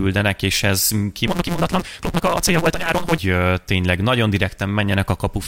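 A block size mismatch (truncated) runs from 1.26 to 3.19 s, starting just after "és ez". One stage hands over longer blocks than the next stage reads, so the tail of every block is discarded, which fits a 256-sample read. The cuts repeat fast enough to form a buzz at 172 Hz, and because material is dropped the speech hurries along about 1.88 times faster while keeping its timbre.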